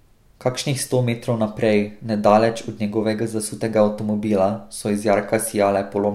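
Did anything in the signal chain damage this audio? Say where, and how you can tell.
No, nothing along the signal chain has left an audible mark on this speech recording. Listening through, no stage from capture to playback shows any sign of damage.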